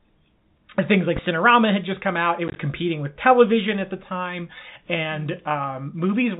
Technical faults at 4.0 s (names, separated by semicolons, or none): none